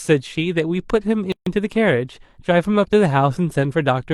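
At 1.32 s the speech drops out into silence for about 143 ms, until 1.47 s, then resumes exactly where it stopped, with nothing lost. The edges are softened by codec smearing, so the fully silent part is shorter. This is a gap at a join of encoded pieces: the audio was encoded as separate segments and spliced untrimmed, so one encoder's padded final frame and the next run's start-up delay of silence both remain in the stream.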